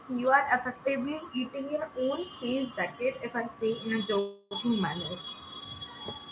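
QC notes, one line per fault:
4.19 to 4.53 s, call audio freeze: the sound stalls for about a third of a second and the last bit gets stretched into a fading buzzy tail. That's likely packets held up in transit draining the jitter buffer. Nothing is lost afterwards, so everything after arrives 320 ms late.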